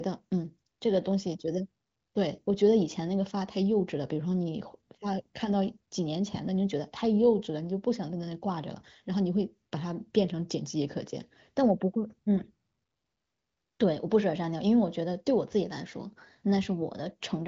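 Speech, with no technical fault audible anywhere in the recording. It comes through the AMR wideband (HD Voice) codec at 23.05 kbit/s, which leaves at most faint coding traces and nothing above about 7.5 kHz.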